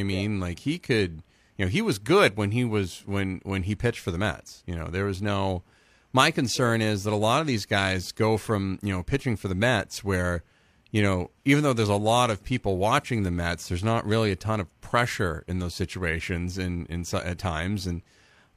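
Nothing goes wrong anywhere in this bit of speech, so there's no fault to point to at any moment.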